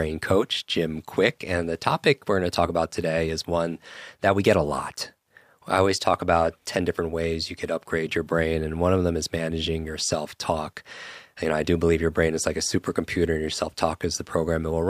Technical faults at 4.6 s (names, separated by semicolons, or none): none